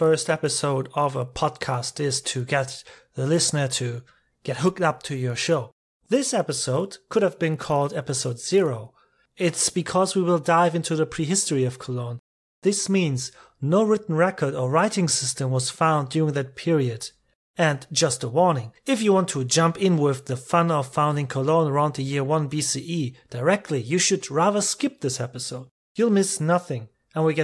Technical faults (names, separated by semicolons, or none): resampler restarted on every block